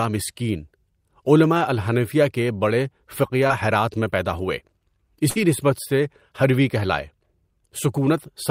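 At 3.47 to 3.52 s, just before "ہرات میں پیدا ہوئے", a short concealed packet loss briefly smears the speech. About 20 ms never arrived, and the receiver extended the preceding sound for roughly 22 ms before blending back.

At 5.30 to 5.38 s, a burst of packet loss leaves about 60 ms absent. The decoder filled roughly 59 ms by continuing the last sound while fading it, heard as a held buzz or hiss. The waveform shows a decaying envelope, then speech resumes further along.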